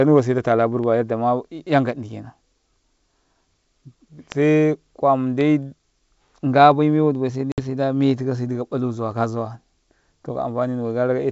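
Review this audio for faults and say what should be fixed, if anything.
Packet loss on an ADPCM call hits at 7.52 to 7.60 s. About 60 ms, roughly three packets, drops to silence: a flat waveform line and a hard-edged blank column on the spectrogram. The decoder's predictor and step size then mismatch the sender's, so speech resumes slightly distorted before settling. Adding packet loss concealment with decoder state resynchronisation to the G.722 link, or protecting packets with redundancy or FEC, would prevent this.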